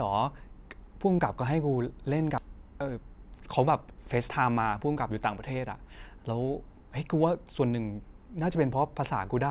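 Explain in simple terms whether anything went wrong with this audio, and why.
Two things went wrong. At 2.38 s there is a skip ahead. About seven-tenths of a second of speech was dropped, and playback jumps straight on with no gap. From 2.48 to 5.11 s comes a jitter buffer speed-up. The receiver had too much audio waiting, so it trimmed tiny slices to catch up. Speech runs about 6% faster at the same pitch, and it sounds slightly rushed.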